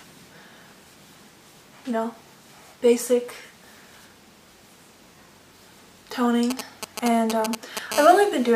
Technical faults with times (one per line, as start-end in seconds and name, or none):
6.50-7.93 GSM signalling bursts
7.94-8.51 GSM phone buzz